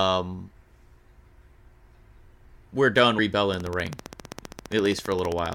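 At 3.18 s, just after "we're done", compressed frames are skipped: the audio jumps ahead by about a third of a second, which fits roughly ten missing 26.1 ms frames.

From 3.54 s to 5.54 s a train of clicks runs at a steady 15 per second, some thirty alike pops that rise roughly 10 dB above the speech. Unlike one codec glitch, they keep ticking evenly through pauses, likely from electrical interference or a faulty connection.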